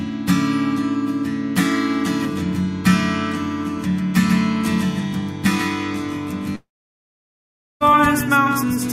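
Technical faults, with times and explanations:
3.78 s to end, doubled audio track: a second full-band copy enters abruptly about 150 ms behind and about 5 dB quieter, and it continues to the end. It has no decay or room colour, unlike a reflection or reverb. The likely cause is the sound being captured twice through a slower path.
6.55 to 7.83 s, long network dropout: the last sound carries on briefly as a fading buzz or hiss, then goes silent for about 1.16 s before the audio returns with roughly 1.26 s missing. A clean edit gap would have no fading tail, and the content skips forward rather than resuming where it stopped. This is likely a long network outage.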